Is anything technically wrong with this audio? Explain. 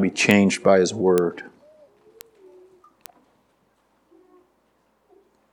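Yes, there are four bit error spikes, single isolated ticks at 0.31 s, 1.18 s, 2.21 s and 3.06 s. Each is one sample where a flipped bit in storage or on a digital link knocked the value off by a power of two before it snapped straight back. The first two peak at about -2 dBFS and the later pair at about -9 dBFS, so you get crisp, broadband clicks with no connection to the surrounding audio.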